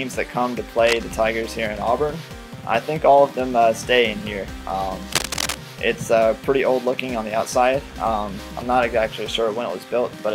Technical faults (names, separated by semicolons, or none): cable scratch noise